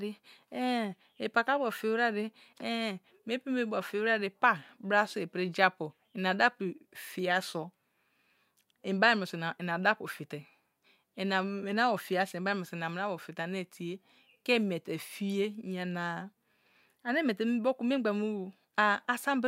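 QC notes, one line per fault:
No faults found.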